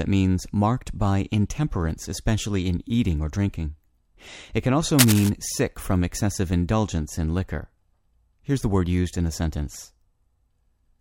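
A speech recording with a burst of cable scratch noise from 4.99 to 5.29 s, between "can also" and "sick from excessive indulgence". For about 0.3 s a dense, ragged scratching rides over the sound at roughly the same loudness as the speech. Its likely cause is a worn lead or connector being moved so that its contact resistance flickers. Unlike a single digital click or a steady hiss, it is grainy, uneven and rustling throughout.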